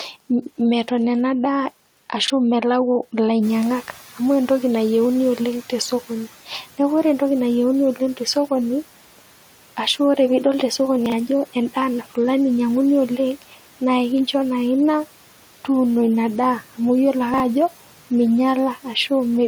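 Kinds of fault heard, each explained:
Chunks out of order: A 20 ms block of audio is played two blocks late, after the material that should follow it, so the 60 ms stretch is reshuffled with three abrupt joins. It sounds like a brief jumbled stutter, at 2.24–2.30 s, at 11.06–11.12 s just after "oree piidol te sokoni", and at 17.34–17.40 s. Nothing is dropped; the sound is only heard in the wrong order.
Noise suppressor catching up: The room's background noise jumps by about 12 dB around 3.5 s, and the suppressor's estimate of that noise trails behind. From 3.42 s the louder noise passes with little reduction, then sinks over roughly 2.6 s, reaching about 9 dB more attenuation by 6.03 s, where the room noise settles about 21 dB below the speech. The result is an audible swell of background noise that fades away.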